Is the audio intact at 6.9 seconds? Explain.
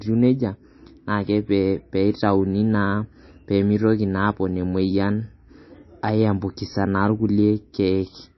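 No. At 6.9 seconds the speech carries the same damage heard across the whole clip, most likely from MP3 compression at a low bitrate, roughly 27 kbps. Short of bits, the encoder removes everything above 5.8 kHz and drops weak frequency lines that flicker on and off between frames. The speech sounds dull, watery and swirly, with smeared consonant onsets. A spectrogram shows a hard ceiling at 5.8 kHz and patchy, blocky gaps below it.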